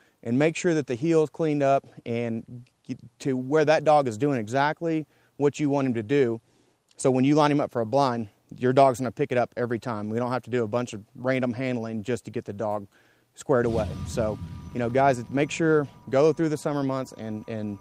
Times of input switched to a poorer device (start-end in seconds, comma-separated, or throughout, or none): none